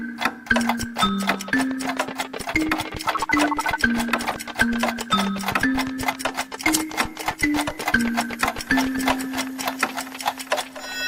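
Two corrupt-frame events make brief chirpy noise bursts at 4.26–4.34 s (loud) and 7.31–7.38 s (fainter). These are garbled energy at wrong frequencies spanning a few frames, not single-sample clicks.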